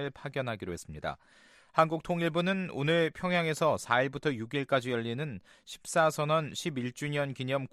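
No technical faults can be heard anywhere in the recording. Nothing in the audio points to a problem in how it was captured or passed along.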